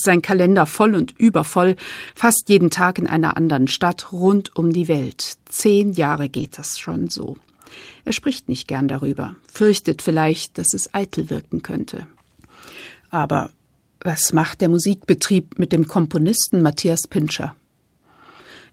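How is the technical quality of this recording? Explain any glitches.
The recording is speech carried over a lossy network link. Brief packet-loss damage clusters around 2.1 s and 6.4 s, with isolated instances later.

The main fault is a lost packet rebuilt from error correction. It occurs at 2.07–2.09 s, at 2.15–2.17 s just after "voll und übervoll", at 4.25–4.27 s just before "um die", and at 6.35–6.45 s. It recurs at 11.28–11.30 s between "vielleicht dass es eitel" and "wirken könnte", and at 16.48–16.50 s. In each case the next packet carried a low-bitrate duplicate of the missing audio, which the decoder played instead. Nothing drops out, but each 20 ms stretch turns momentarily rough and grainy. The 60 ms stretch at 6.35 s fits three consecutive losses.

Short concealed packet loss appears at 2.11–2.15 s and 6.47–6.51 s. Here about 20 ms of audio arrived too late and no backup copy existed. 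The decoder extrapolated the preceding sound to fill roughly 15–18 ms, then crossfaded into the real signal. This is heard as a brief smear or wobble. Each one sits right beside an error-corrected patch, so these two moments sound like a compact burst of degradation.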